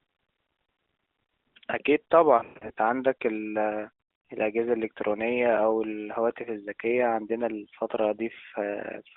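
Between 2.38 and 2.72 s there are lost AMR speech frames. The decoder patches each failed frame by repeating the last good settings at falling gain, so the speech warbles and dips. The longest 120 ms gap smears and fades before rough recovery, which fits roughly a dozen dropped frames.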